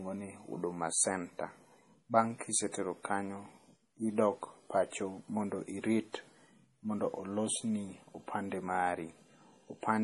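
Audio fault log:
throughout: MP3 compression. The speech sounds watery and swirly, with s sounds turning into metallic chirps and consonant onsets smeared, and nothing is heard above about 11.4 kHz. The likely cause is heavy MP3 encoding, with damage at a level that points to a bitrate near 32 kbps. Short of bits, the encoder cuts off the treble at a fixed point and drops quieter frequency lines, which flicker on and off between frames, producing the swirl.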